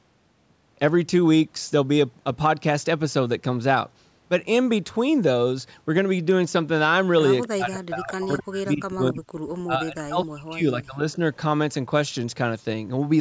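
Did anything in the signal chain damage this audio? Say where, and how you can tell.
Yes. Speech sinks about 40 dB and breaks up at 7.46–9.26 s and 9.63–11.19 s. This is likely speech suppressed in double talk by the echo canceller.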